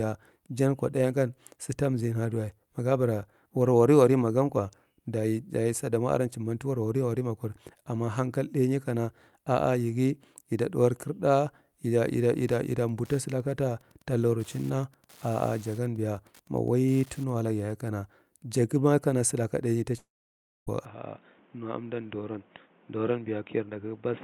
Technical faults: Wi-Fi interference; long network dropout; input switched to a poorer device

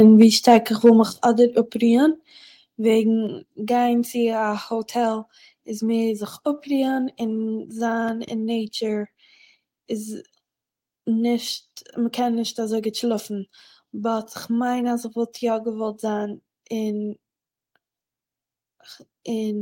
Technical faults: microphone overload; microphone volume stepped down

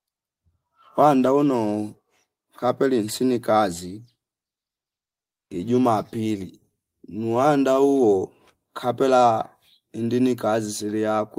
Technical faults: none

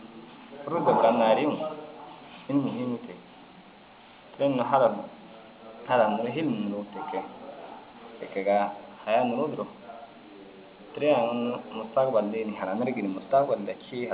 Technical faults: none

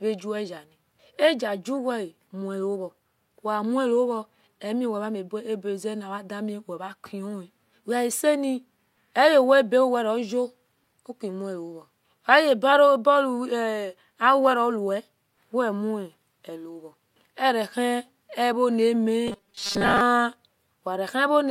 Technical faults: robotic sound from repeated short buffers

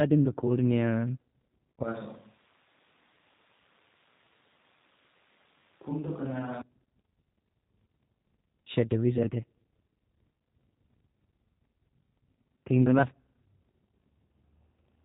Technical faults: G.729 codec; switch to a distant microphone; VoIP packet loss concealed by the speech codec

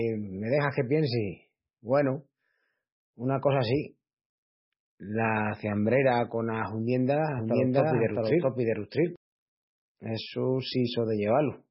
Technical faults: MP3 compression; doubled audio track

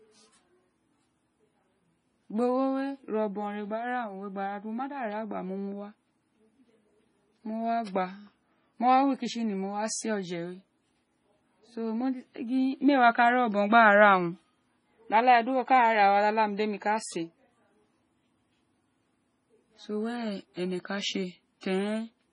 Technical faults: MP3 compression; pre-echo

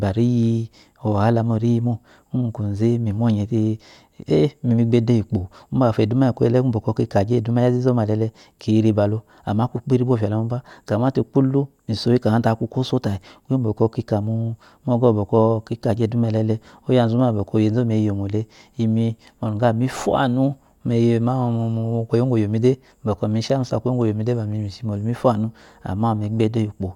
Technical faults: none

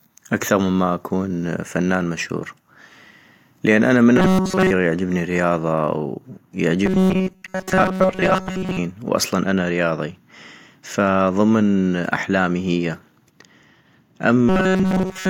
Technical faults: robotic sound from repeated short buffers

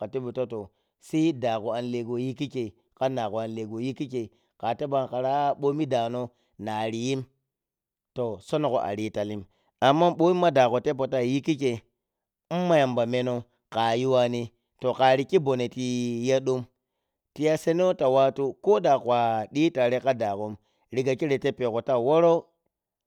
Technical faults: none

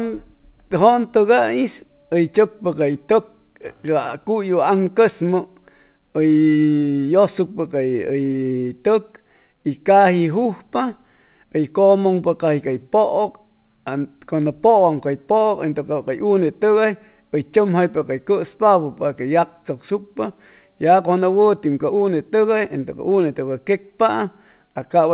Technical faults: none

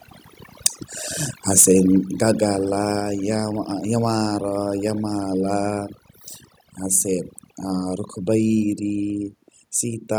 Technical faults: overdone noise removal; microphone overload; microphone volume stepped down

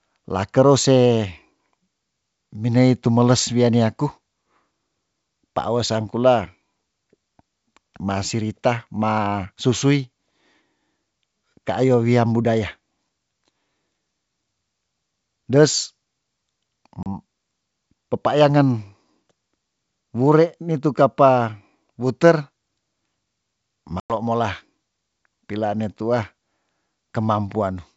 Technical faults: packet loss on an ADPCM call

